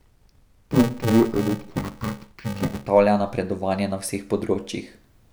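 From 0.00 to 2.87 s, before "napredovanje na", interleaved audio read as planar, with short blocks (which fits 128 samples), makes speech dull, robotic and buzzy at 345 Hz, with no octave drop as in a pitch shift.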